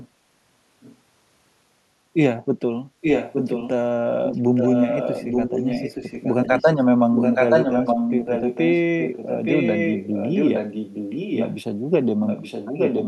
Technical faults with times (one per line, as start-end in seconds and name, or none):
0.81-0.96 echo leak
3.01-3.70 echo leak
4.23-6.68 echo leak
7.15-11.58 echo leak
12.26-13.08 echo leak